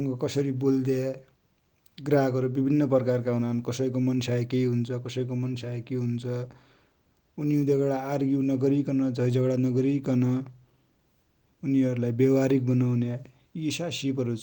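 No technical faults can be heard anywhere in this speech recording.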